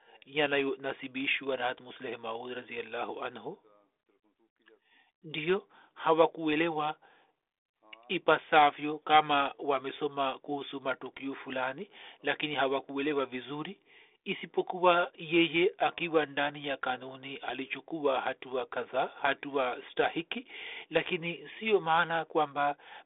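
No technical faults are audible.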